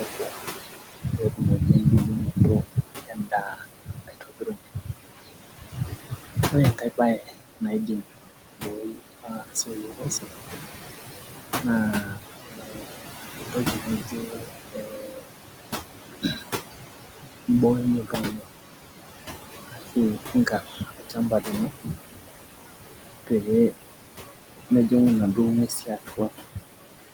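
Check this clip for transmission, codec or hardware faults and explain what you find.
The faults come from noise suppression, not from transmission or codec damage.

Noise suppressor artifacts run through the whole clip. The suppressor lowers bands it judges to be steady noise by about 16 dB. The room noise, about 10 dB below the speech, sinks in pauses and swells back under speech.

Speech cut by the noise suppressor occurs at 0–8.03 s, 8.57–10.49 s, 11.62–15.28 s, 16.08–16.43 s, 18.02–18.56 s, 19.66–21.95 s, 23.27–23.91 s and 24.7–26.58 s. Quiet parts of the speech were mistaken for noise and pulled down by up to about 19 dB, so soft consonants and word endings sound swallowed. The opening stretch is hit hardest, with around three seconds affected.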